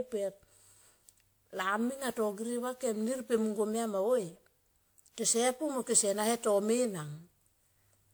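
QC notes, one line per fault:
Throughout, generation loss: hollow, swirly, smeared speech with blurred attacks, worse than one 128 kbit/s WMA-like pass explains; likely about seven re-encodes.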